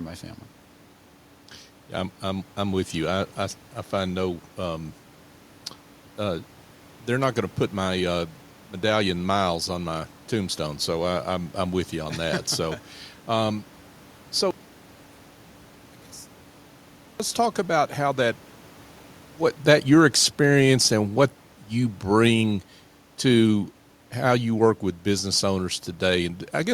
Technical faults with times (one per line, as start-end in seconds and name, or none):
14.51-17.20 one channel inverted
19.90-26.32 automatic gain falling